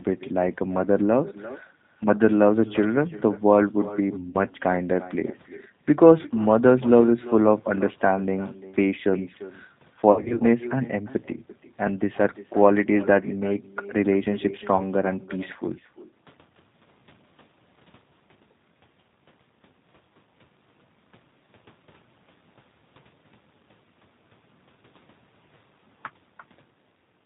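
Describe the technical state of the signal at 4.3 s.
At 4.30 to 4.36 s there is VoIP packet loss concealed by the speech codec. The decoder stretched its last pitch and filter into a buzzy tone or coloured noise that fades, rather than leaving a silent dropout. The missing stretch is about 40 ms, which fits two lost packets.

An echo with no canceller runs underneath. It is a thinner copy about 17 dB down, arriving roughly a third of a second late. That makes it a distinct repeat, not a reverb tail.

The G.729 codec damage is plainly audible. Nothing passes above 4 kHz, and the rough, synthetic texture points to an 8 kbit/s model-based coder, not simple band-limiting.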